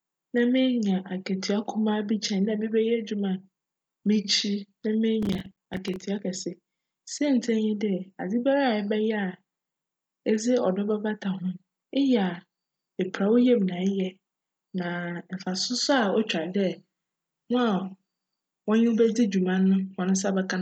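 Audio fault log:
5.23–6.02 s processor overload crackle: around twenty silent gaps of roughly 5 ms each tear the speech in quick succession, a gritty burst rather than one clean dropout.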